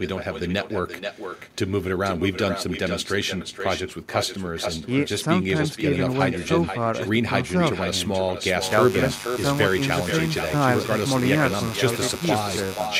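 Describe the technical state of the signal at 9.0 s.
Two faults overlap at 9.0 s. Echo with no canceller runs through the whole clip. Each stretch of speech returns about half a second later, only about 7 dB quieter and thinner than the original. The far end's loudspeaker feeds back into its microphone and nothing subtracts it, so the sound makes the full network round trip. Room reverberation would smear continuously into the tail. This is a distinct, delayed second copy.

Mains buzz is also present, from 8.59 s to 12.90 s, so 9.0 s falls just after it begins. Sharp switching spikes at twice the 50 Hz mains rate, from a dimmer, rectifier or poor shielding, spread harmonics up into the kilohertz range. The result is a steady, raspy buzz roughly 15 dB below the speech. A clean hum would be a smooth, low sine tone. The rasp and bright upper harmonics mark this as buzz.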